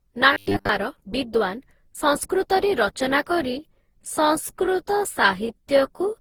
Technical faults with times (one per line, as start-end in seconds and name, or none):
0.00-6.21 generation loss
0.33-0.69 robotic sound from repeated short buffers
3.21-6.21 time-stretched section